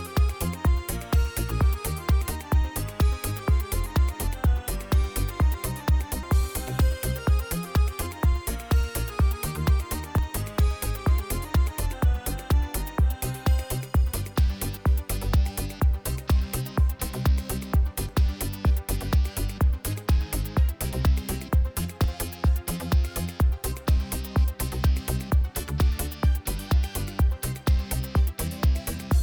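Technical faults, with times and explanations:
6.23, 10.18, 14.14, 18.09 and 22.04 s: audio missing between chunks. About 50 ms vanishes with no silent gap, likely at 4-second chunk boundaries, unlike irregular dropouts that leave silence.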